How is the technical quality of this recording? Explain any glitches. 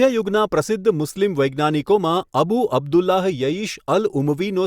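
No technical faults are audible.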